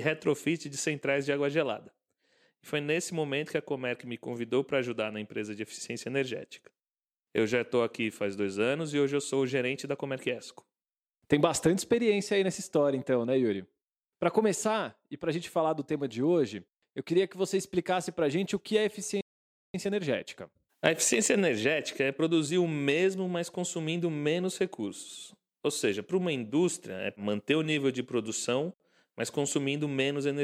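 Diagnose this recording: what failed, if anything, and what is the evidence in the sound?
The speech drops to silence at 19.21 s and resumes at 19.74 s, a 0.53 s gap. This is a playback stall, likely the player's buffer running dry.

From 19.74 to 22.74 s the speech is hurried, at 1.1 times normal speed, with unchanged pitch. This is time-compressed catch-up, where the player splices out short pieces to clear its backlog.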